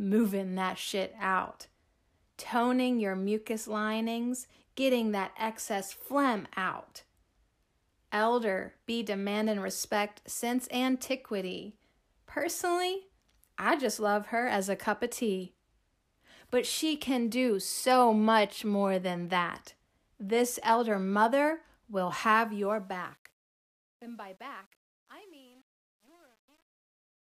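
Right after "elder mother will", at 22.30 s, the fade-out starts picking up truncation distortion. The level stage keeps too few bits with no dither, which fits roughly 9-bit resolution, so from about 23.27 s to the end the tail turns gritty.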